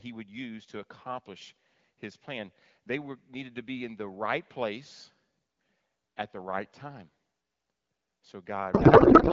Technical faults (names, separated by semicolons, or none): codec payload misread